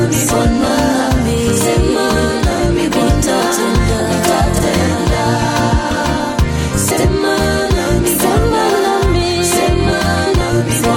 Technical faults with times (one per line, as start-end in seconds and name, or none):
0.65-0.71 frames out of order
2.51-2.60 frames out of order
4.54-4.63 frames out of order
6.90-7.04 frames out of order